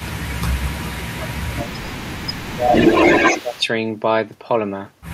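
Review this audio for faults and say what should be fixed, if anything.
From 0.0 to 0.2 s a faint delayed copy of the speech trails about 218 ms behind, roughly 20 dB down, and from 0.39 to 3.66 s that copy returns much stronger, at about 5 dB above the speech itself, smearing it into a doubled sound. This is an echo leak, likely from a far-end loudspeaker whose echo canceller failed to model and subtract the path back into its microphone, so the 218 ms round trip was sent back. Using a headset or retuning the canceller's adaptive filter to converge on that delay would prevent it.

Between 0.07 and 2.74 s the speech dips by up to about 15 dB, for about two seconds in total. A shorter dip of the same depth, lasting about 0.2 s, occurs from 3.3 to 3.57 s. This is speech suppressed in double talk: with both sides active, the canceller likely could not tell the local talker from loudspeaker echo and attenuated everything. 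Better double-talk detection, so suppression is held off while the near-end talker is active, would prevent it.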